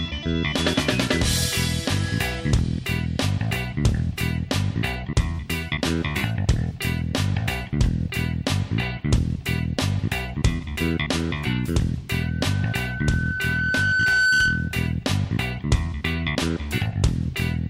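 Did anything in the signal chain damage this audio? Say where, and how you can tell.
Yes. Loudspeaker feedback squeal, in the analogue acoustic path, from 12.2 to 14.87 s. A lone 1.5 kHz tone swells over about two seconds to roughly 5 dB above the sound. The microphone was picking up its own loudspeaker, and loop gain exceeded one there.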